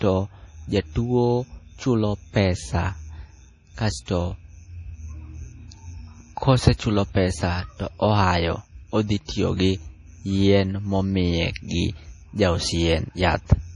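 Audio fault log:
throughout  MP3 compression: nothing above 10.5 kHz, and the speech sounds heavily watery and swirling, with chirpy s sounds and smeared onsets. Unlike a plain low-pass filter, weak frequency lines flicker between frames, likely from a bit-starved encoder, which fits a rate near 32 kbps.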